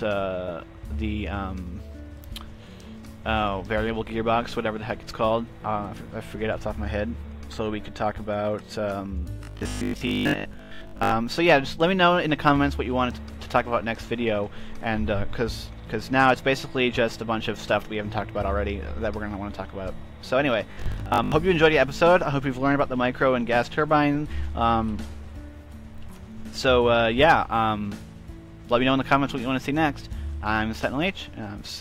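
From 9.39 to 11.11 s, and again from 20.72 to 21.32 s, there's robotic sound from repeated short buffers: a rigid 50 Hz buzz, likely from a 20 ms chunk being replayed. Most of the first stretch is repeats, and about half the second.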